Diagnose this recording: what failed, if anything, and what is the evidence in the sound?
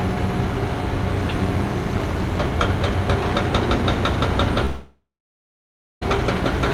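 From 1.28 to 2.47 s a metallic buzz of about 6 dB at around 200 Hz points to overlap-add ripple: frame-based processing rejoins windows whose overlap does not sum to constant gain. Its steady per-frame rate distinguishes it from random dropout gaps.

At 4.65 s the sound turns to a fading buzz, then about 0.96 s of silence, resuming at 6.03 s with 1.36 s missing. This is likely a long network dropout, with concealment outlasting brief packet-loss glitches.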